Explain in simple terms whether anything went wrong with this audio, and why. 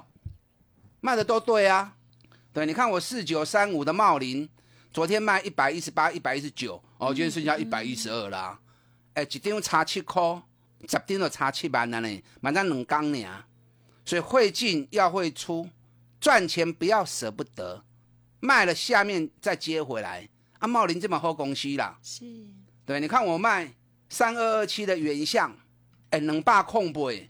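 Nothing went wrong here: the speech comes across steady and even the whole way, with no glitches, dropouts or odd sounds to point to.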